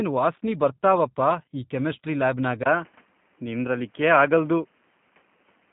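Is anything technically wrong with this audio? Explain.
Yes. Throughout, the speech sounds rough and slightly synthetic, with nothing above 3.8 kHz. This is G.729 codec damage: the speech is rebuilt from a vocal tract model, a pitch predictor and a few pulses per frame, and the sound fits an 8 kbit/s G.729A stream.

At 2.63 s, after a 20 ms gap, the sound turns duller and more boxy until the end. The band now stops at 3.4 kHz, and a faint new background noise appears while loudness stays about the same. The likely cause is the input switching to a poorer device, such as another microphone or a headset's call profile, with its own narrower response and noise floor.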